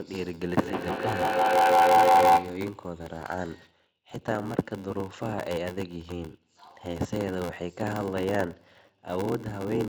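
Feedback howl runs from 0.55 to 2.75 s in this speech clip: a microphone and loudspeaker in one room are on the same call, and each trip round that loop comes back louder. Instead of fading, the repeats narrow to a tone of around 700 Hz that pulses roughly every 150 ms and peaks about 11 dB above the speech. It stops at 2.75 s, when the loop is broken. A block size mismatch (padded) is present throughout: one stage writes blocks shorter than the 512-sample blocks the next stage reads, and the shortfall in each block is filled with silence. That repeated gap produces a buzz at 86.1 Hz, the block rate, and stretches the speech to 0.861 times its normal speed while the timbre stays. The numbers fit a writer supplying roughly 441 samples per block.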